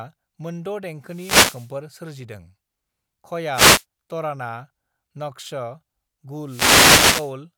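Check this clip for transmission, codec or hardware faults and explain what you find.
Three wireless microphone noise hits break into the speech, at 1.01 to 1.77 s, 3.51 to 3.85 s and 6.44 to 7.35 s. Each is a short swish of static over the voice. The analogue FM radio signal faded as reflections cancelled. Receiver noise then rose.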